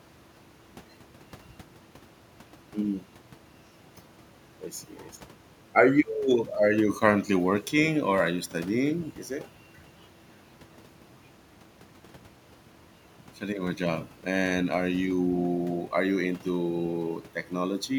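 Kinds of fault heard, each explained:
Nothing here calls for a technical explanation, since no faults turn up anywhere in the speech.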